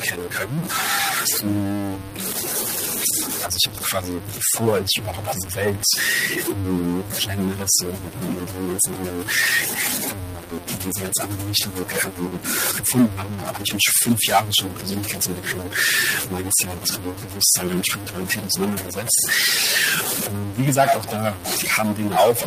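From the start and through the whole recording, a grainy or buzzy distortion rides on the speech, and the pauses carry a gritty noise floor rather than silence. The likely cause is a stuck bit: one data line held at a fixed value, so roughly half the samples are offset by that bit's weight in a waveform-dependent pattern.

Noise suppressor artifacts are also present throughout. The suppressor attenuates bands it judges to be steady noise on a frame-by-frame basis, so the background dips between phrases and returns under the speech. The room noise rises by about 22 dB around 6.5 s, where it sits about 19 dB below the speech.

Speech cut by the noise suppressor runs from 0.0 to 15.8 s, with cuts up to about 18 dB affecting most of that span. It recurs from 16.02 to 19.31 s, at up to about 17 dB over roughly three seconds, and again from 19.56 s to the end, at up to about 16 dB. In these spans the suppressor misclassifies soft consonants, word endings or quiet phrases as noise, and they sound swallowed or faint.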